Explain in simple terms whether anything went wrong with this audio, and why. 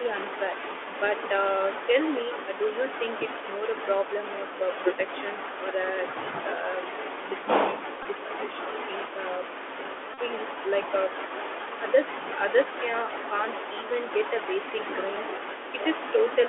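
Two things went wrong here, both typical of a Bluetooth headset call.

The whole clip runs through the Bluetooth CVSD headset codec, the old narrowband format headsets use for calls. It only keeps a slice of the sound, roughly 300 Hz to 3.5 kHz, so the speech sounds thin and boxy with no real bass or sparkle. The codec tracks the waveform in small up-or-down steps, which leaves a grainy hiss underneath and makes s sounds scratchy. The damage is easy to hear throughout.

There are also two Bluetooth headset packet repeated moments, at about 8.03 to 8.05 s and 10.14 to 10.19 s. Each time, a few packets between headset and phone went missing, and the chip kept replaying the last good chunk instead of going silent. Those quick replays turn into a short buzzy burr lasting a few hundredths of a second. The second one is longer.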